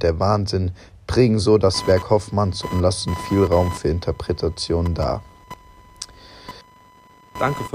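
From 1.74 s to the end, a buzzing, chirping whine pulsing at around 1 kHz sits roughly 15 dB below the speech. This is computer activity noise: processor or graphics load changes disturb the audio circuit's shared ground.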